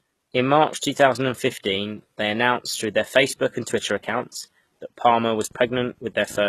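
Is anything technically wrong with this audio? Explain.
Yes. Throughout the speech the treble sounds synthetic, s sounds are gritty and lispy, and nothing reaches above 12.3 kHz. This is likely HE-AAC compression: low bands are coded, upper bands copied upward, consistent with a very low bitrate around 16 kbps.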